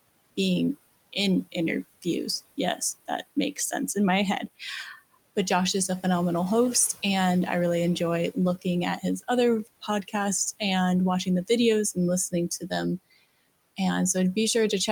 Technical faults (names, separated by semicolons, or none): speech cut by the noise suppressor